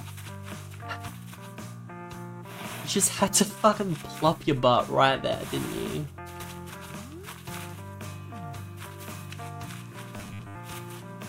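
From 10.16 to 10.57 s, incoming audio is likely arriving too late for playback, so the software keeps looping a short stretch of what it already has while the fresh material is dropped. Most of that window, roughly seventy percent, is repeated rather than new. The loop imposes a fixed buzz at 100 Hz, which fits a repeated segment about 10 ms long. The result is robotic sound from repeated short buffers: a rigid, metallic drone that only loosely follows the underlying sound.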